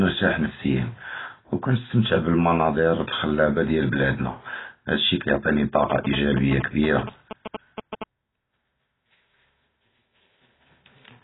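From start to finish the speech sounds dull and smeared, with a watery, fizzy texture on sibilants and held vowels. That is most likely AAC compression at heavy settings, pointing to AAC-LC at a very low bitrate around 16 kbps. The encoder discards the upper band and quantises what remains coarsely. On a spectrogram nothing appears above 3.9 kHz, and the region below shows patchy holes and blurred time detail where coarse quantisation has thinned the energy.

From 5.9 to 8.0 s GSM signalling bursts cut in. A nearby 2G phone transmits short packets of radio bursts while it exchanges signalling with the network, and the audio circuitry rectifies them into sound. The result is a galloping dit-dit-dit of short buzzes at 217 Hz, sitting roughly 10 dB below the speech. On a spectrogram they appear as stacked harmonic lines of 217 Hz in short, regularly spaced blocks. In the waveform they show as clusters of sharp pulses.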